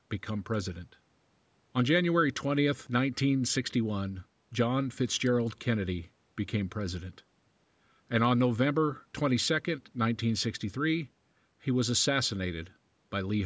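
No faults in the speech; the call microphone processing leaves its expected mark, with the lowest bass trimmed and no content above 8 kHz.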